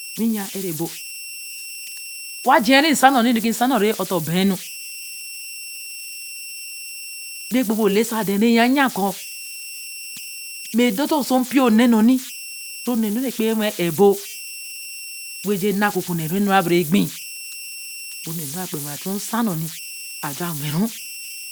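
Speech runs with converter idle tones throughout: a tone around 3 kHz, about 15 dB below the signal, haunting pauses and roughening quiet passages. Unlike steady interference, it comes from an undithered delta-sigma converter cycling through fixed bit patterns, so its pitch follows the input's offset.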